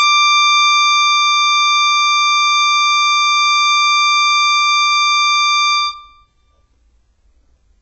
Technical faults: HE-AAC compression

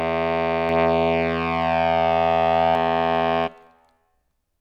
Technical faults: doubled audio track

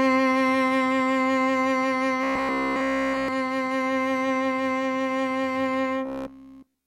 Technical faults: robotic sound from repeated short buffers

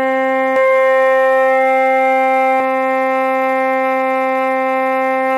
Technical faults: doubled audio track

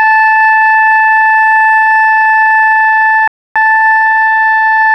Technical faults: rebuffering stall

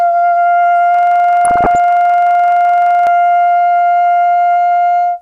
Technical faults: MP2 compression; system hang loop; DAB burbling

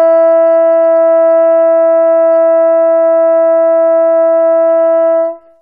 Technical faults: none

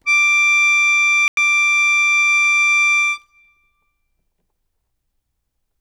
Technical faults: corrupt frame muted; corrupt FLAC frame

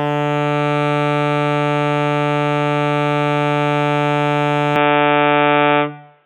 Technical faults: input switched to a poorer device

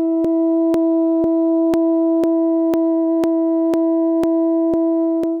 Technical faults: periodic USB or driver dropouts

